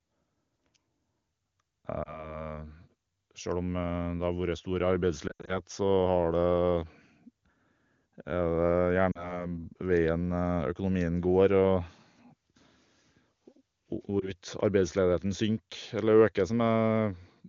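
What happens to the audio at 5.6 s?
Lost AMR speech frames, from 5.27 to 5.60 s: the decoder repeats its last good pitch and vocal-tract settings at falling gain, so the speech warbles and fades in brief dropouts. The spectrogram shows smeared, flattened harmonics and waveform dips.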